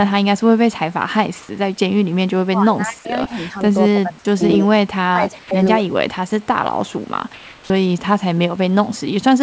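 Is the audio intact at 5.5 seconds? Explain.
No. From 5.12 to 5.87 s the sound dips in pieces, about half a second in all, at worst roughly 15 dB down. This is speech suppressed in double talk: both sides were likely talking at once, and the echo canceller turned the talker down along with the echo.

From 5.39 to 5.51 s, 120 ms of the real background gives way to a flat, featureless hiss about 6 dB quieter. This is comfort noise in place of the background, likely because transmission paused while the receiver filled the gap with synthetic noise.

Within that gap, the sound resuming at 5.47 s loses its first 40 ms and starts abruptly, with no soft beginning. This onset clipped by the voice detector is likely due to the detector reacting late to the sound restarting.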